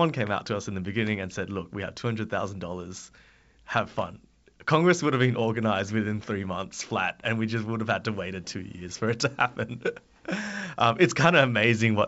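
No technical faults are audible in this speech.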